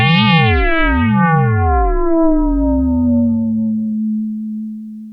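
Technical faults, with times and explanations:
No technical faults can be heard in this audio.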